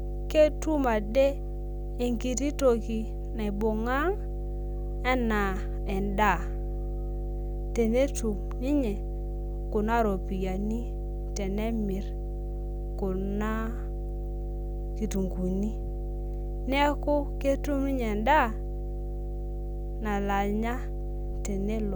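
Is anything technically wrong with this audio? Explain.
Yes. Mains hum runs through the whole speech clip, a steady low tone at 50 Hz sitting only about 5 dB below the speech, so it is prominent rather than faint. It comes from power-line current leaking into the signal path, typically through a ground loop between connected equipment or magnetic coupling from a nearby transformer. The result is a constant drone under every phrase, carrying some low harmonics of the 50 Hz fundamental, present in pauses as much as during speech.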